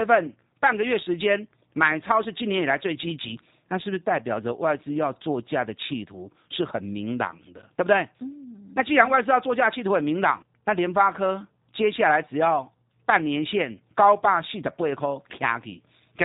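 G.729 codec damage throughout: the speech is rebuilt from a vocal tract filter and sparse pulses, leaving it rough, synthetic and dull above 4 kHz, consistent with an 8 kbit/s stream.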